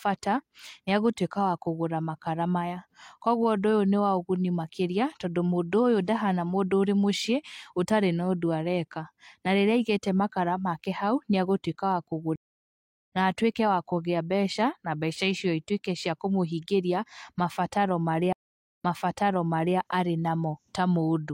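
At 12.36 s the connection drops and the player rebuilds its decoder mid-stream, a stream reconnect. The speech stops for 0.72 s, then jumps ahead to "na atuĩke wa kũgĩa" about 0.7 s later than where it broke off, so that stretch is lost. A second reconnect at 18.33 s follows "kũmũhingĩria mabataro" with 0.48 s of silence. The server then resends buffered audio, so the speech resumes 0.98 s earlier and repeats until 19.78 s.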